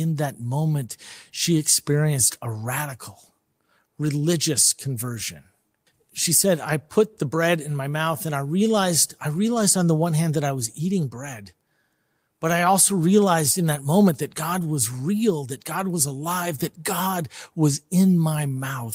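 Nothing in this speech recording calls for comment: there's no dropout, glitch or other technical fault to point to anywhere along the way.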